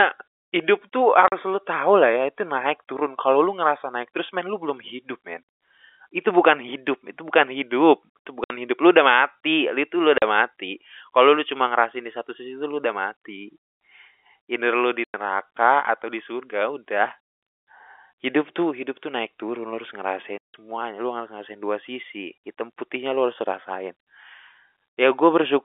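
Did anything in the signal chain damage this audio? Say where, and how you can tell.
Yes, at the network stage: packet loss filled with silence. The speech drops out abruptly at 1.28, 8.44, 10.18, 15.04 and 20.38 s. Gaps last 40, 60, 40, 100 and 160 ms. The 10.18 s gap follows "udah mati itu lu". The longest falls between "naik turun lu harus" and "lu harus ngerasain dua". Every gap is a multiple of 20 ms, which fits 20 ms packets. Lost packets were replaced with digital silence. Their edges are hard, while the G.711 telephone band carries the sound around them.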